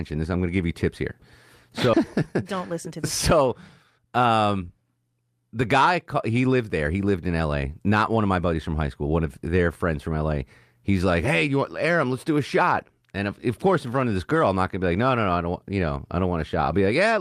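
At 1.93 to 1.95 s a skip ahead occurs: about 0.4 s of speech was discarded, so playback jumps forward and the two sides join almost without a gap. From 2.27 to 4.29 s a jitter buffer speed-up trims short pitch-period pieces to drain excess buffered delay, running about 8% fast at unchanged pitch and sounding hurried.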